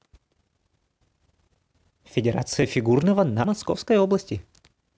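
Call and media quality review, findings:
Forward jumps in speech at 0.82, 2.62, 3.44 and 4.21 s, no gap; likely dropped buffer (overrun) in capture, roughly 15 ms skipped each, about 50 ms at 3.44 s.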